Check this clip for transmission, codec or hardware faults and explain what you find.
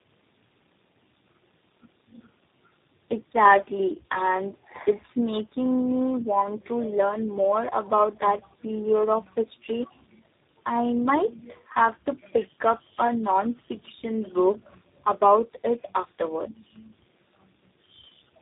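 One fault runs through the whole speech clip.

Tandem speech coding, throughout: the sound points to three low-rate coders in series, likely GSM, G.726 and G.729A, each recoding the last one's output. Speech is rough, muffled and warbly, with nothing above 3.8 kHz.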